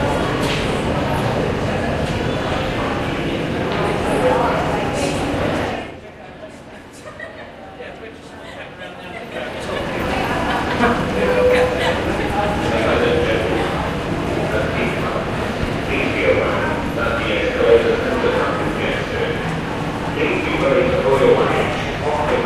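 Nothing here trips me up; I listened all the way through and didn't catch a single technical problem anywhere in the sound.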